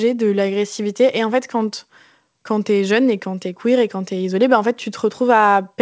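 No technical faults audible.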